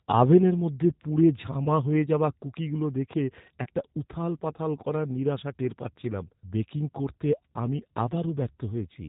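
Throughout, the speech carries G.729 codec damage, consistent with 8 kbit/s G.729A: nothing above 4 kHz, a slightly rough, synthetic texture from pulse-based excitation. Unlike a simple 4 kHz low-pass, it has a coded, buzzy graininess rather than clean muffling.

At 1.64 to 1.68 s and again at 3.64 to 3.67 s, VoIP packet loss concealed by the speech codec appears. Each gap fits a single lost 20 ms packet. The decoder stretches the previous sound into a brief fading buzzy tone or coloured noise, not a silent dropout or click, and the voice stays weak or distorted for a moment afterward.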